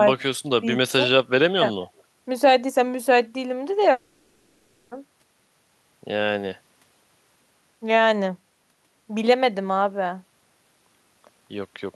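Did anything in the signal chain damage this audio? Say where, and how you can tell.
Yes, at the network stage. From 3.91 to 4.93 s the speech gives way to about a second of smeared, synthetic continuation with no real content, and then normal speech resumes with that stretch missing. This is likely a long network dropout, with the receiver's concealment filling the gap.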